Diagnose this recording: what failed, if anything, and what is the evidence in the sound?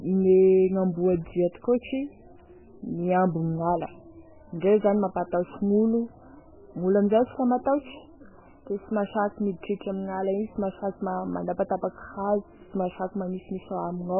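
The problem sits at the codec stage, and it runs the whole length of the speech. Nothing comes through above 3 kHz, so sibilants lose their edge and the sound turns dull and boxy, with a heavy watery, swirling texture on top. That fits MP3 compression starved of bits, likely at a very low bitrate around 8 kbps. The encoder cuts off the treble and keeps dropping weak frequency lines in and out between frames, which makes the warble.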